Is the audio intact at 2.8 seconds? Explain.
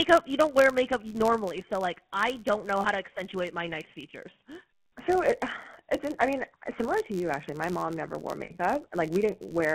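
No. From 2.8 to 2.85 s the sound briefly freezes into a rough, metallic ring instead of moving on. These are lost GSM frames. For about 40 ms, which fits two dropped 20 ms frames, the decoder had nothing valid to work from. It reused the parameters of the last good frame, so the vocal-tract shape stays stuck and rings.

The moment also carries the constant sound of the GSM full-rate codec. The speech has a buzzy, gravelly roughness, and the band is confined to roughly 150 Hz to 3.4 kHz. The damage is plainly audible, consistent with 13 kbps full-rate coding. The codec models the vocal tract and excites it with regularly spaced pulses, keeping only every third excitation sample, and that coarse excitation produces the grit.

A low buzz at about 86.1 Hz runs underneath and rises and falls with the speech level. It comes from a filter restarted on every block. Each block the filter starts from silence, so every block opens with a small transient, and those ticks repeat fast enough to fuse into a buzz. 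The rate fits a 512-sample buffer.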